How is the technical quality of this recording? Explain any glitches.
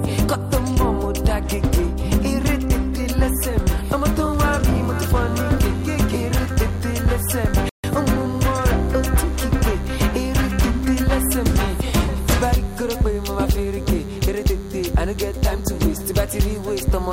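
Two faults stand out: a buzz that comes in partway through and stays, and a brief dropout in the middle of it.

From 3.89 s to the end, a thin, steady buzz with a harsh, many-harmonic edge sits around 30 dB below the main sound. This is DECT cordless phone buzz: a nearby DECT handset or base transmits a short radio burst every 10 ms, and the audio circuitry rectifies it into an audible tone at the 100 Hz burst rate, stacked with harmonics.

Between 7.69 and 7.84 s the output drops to silence for about 145 ms, cutting the sound off mid-flow before it resumes. This playback stall was likely caused by the player running short of data or having its audio thread blocked, so nothing reached the output until it recovered.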